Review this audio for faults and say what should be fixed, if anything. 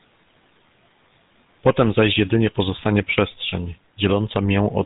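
The speech has been through the GSM full-rate codec from start to finish. The excitation is rebuilt from sparse, evenly spaced pulses, which gives the buzzy, gravelly roughness, and the coarseness fits the 13 kbps mode. A spectrogram shows an empty band above 3.8 kHz and smeared harmonics below it. Record or route the audio through a wideband path so it never passes through this codec.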